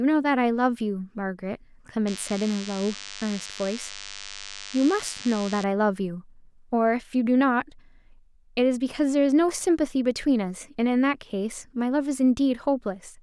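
From 2.07 s to 5.64 s, a DECT cordless phone buzz sits under the speech: a thin, steady 100 Hz drone rich in harmonics, roughly 15 dB below the speech. A nearby DECT transmitter's 10 ms radio bursts are being rectified in the audio circuitry.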